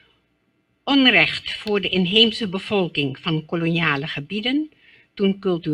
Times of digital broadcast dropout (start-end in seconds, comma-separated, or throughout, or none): none